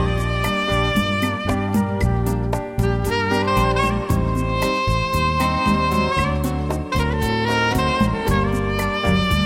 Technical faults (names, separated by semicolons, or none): none